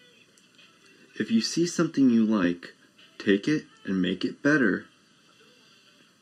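A speech clip with channel delay (comb filtering) from start to finish. One channel arrives late by a little under a millisecond, and the two are then summed to mono. Sound common to both sides cancels at evenly spaced frequencies. The first notch sits at around 700 Hz, with further notches repeating up the spectrum. The result is a hollow, phasey tone that never changes, because the notches stay fixed.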